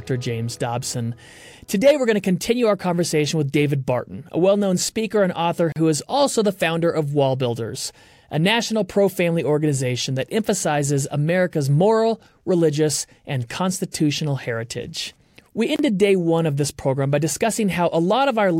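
A brief hole of about 39 ms opens from 5.72 to 5.76 s, smeared at the edges then resuming: a gap at a join of encoded pieces, spaced every 10 s, left untrimmed.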